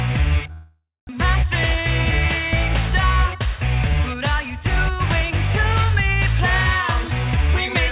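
From 0.52 to 1.11 s the sound smears into a fading buzz that carries on from the last thing heard, thins out, and leaves about 0.22 s of silence before the audio resumes with a piece missing. This is a long network dropout, likely a stall in packet delivery: the receiver concealed the gap for about 0.57 s, but roughly 0.4 s of the original never played, and the playout delay jumped by something like 150 ms.

Between 2.90 and 4.64 s the audio runs noticeably quicker, about 106% of normal speed, while the pitch holds steady, giving the passage a slightly hurried feel. This is a jitter buffer speed-up. With more audio held than it aims for, the receiver trimmed many tiny pitch-period slices in succession to bring its buffer back to target, shaving off around a tenth of a second in total. Throughout, the narrow G.711 call path leaves nothing above 4 kHz.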